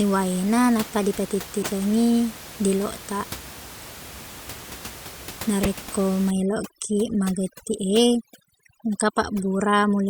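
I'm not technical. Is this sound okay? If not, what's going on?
No. At 1.62–1.66 s, 4.36–4.39 s, 5.63–5.68 s and 7.79 s, a corrupt frame was decoded: damaged compressed data was played anyway, causing brief chirps or blips, loudest at 5.6 s. From 6.31 s to the end, overdone noise removal strips away the room noise along with quiet parts of the speech, leaving the background as twinkling near-silence.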